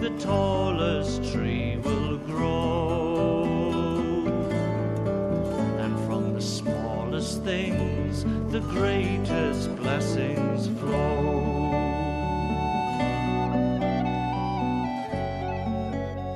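Nothing is technically wrong with this audio clip, and no faults can be heard anywhere in it.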